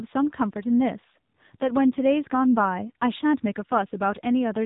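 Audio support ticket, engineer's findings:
AMR narrowband mobile codec, whole clip. Speech buzzy and synthetic, nothing above about 3.8 kHz. Heavy pulse-excited vocal-tract modelling fits a low AMR-NB mode near 6.7 kbps. A plain low-pass would dull the top without this buzz.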